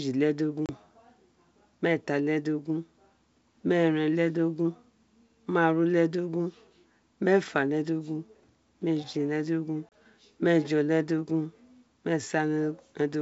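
At 0.66 to 0.71 s and again at 9.89 to 9.92 s there's packet loss on the ADPCM call: about 30 ms of speech, a few packets' worth, drops to hard-edged silence. The G.722 decoder's predictor and step size lose track of the sender, so speech comes back with brief distortion before settling.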